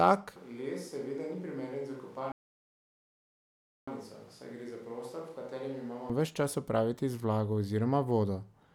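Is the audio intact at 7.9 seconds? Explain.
Yes, the speech at 7.9 seconds is intact, with no dropout, click, distortion or other fault at that moment.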